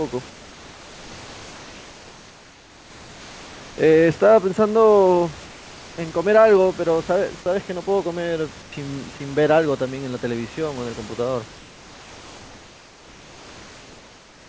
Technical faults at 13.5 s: comfort noise in place of the background

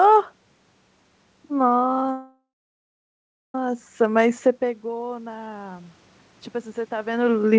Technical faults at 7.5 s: none

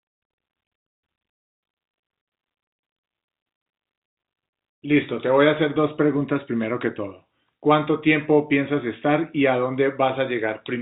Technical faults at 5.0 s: none

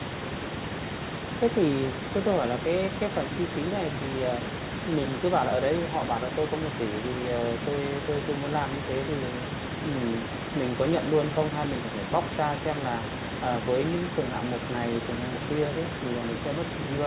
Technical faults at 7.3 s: none

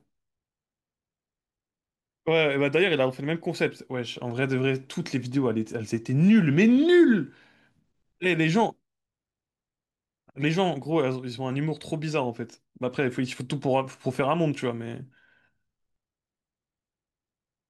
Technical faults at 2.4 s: none

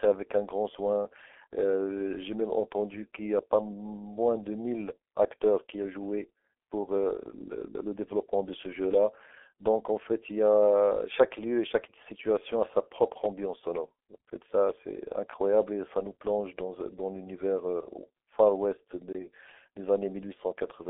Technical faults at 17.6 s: G.723.1 codec

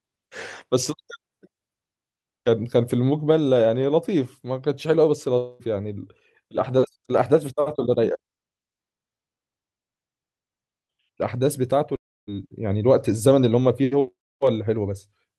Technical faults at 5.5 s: long network dropout

